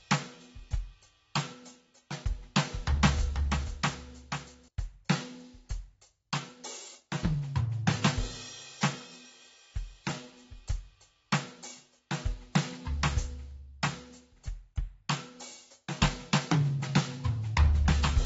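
The music is dull and smeared from start to finish, with nothing above 7.7 kHz and a warbly, fizzy edge on sustained tones. That's likely AAC compression at a starved bitrate, with the signature of AAC-LC at something like 24 kbps. The encoder has chopped off the top end and quantised the remaining bands so coarsely that they smear and shimmer.

From 2.58 to 4.68 s there's a doubled audio track. A second full-band copy runs about half a second behind the original and a few dB quieter. It has no reverb tail or room colour, so it's a hard, slapback-style repeat, and it cuts in and out abruptly at those two points. The likely cause is the same audio being mixed in twice, either captured again over a slower path or left out of step by an edit.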